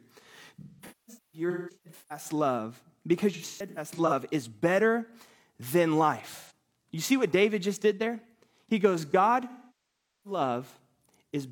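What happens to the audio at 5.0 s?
Nothing goes wrong at 5.0 s; the speech plays through that moment intact, with no dropout, click, distortion or other fault.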